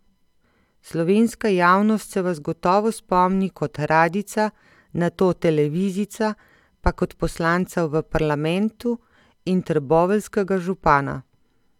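No technical faults can be heard in the speech. Nothing points to a problem anywhere between capture and playback.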